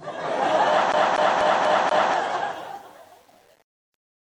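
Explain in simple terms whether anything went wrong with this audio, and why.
From 0.92 s to 2.14 s, the sound catches and stutters: the same quarter-second slice, about 0.24 s long, plays five times in a row, with a tiny gap each time it jumps back. This is a CD stuck on one turn. A scratch keeps knocking the laser back to the same spot every time the disc spins around, so one short piece repeats at a steady, even rate until the player finally breaks free.

From 2.44 s to the end at about 4.3 s, the fade-out turns rough and grainy, and from 2.68 s on it is at its roughest instead of thinning away gently. This is truncation distortion on a fade. As the volume was turned down, the quiet parts were stored with too few steps, which fits about 8 bits. With no added noise to smooth it, the softest sound became blocky and harsh.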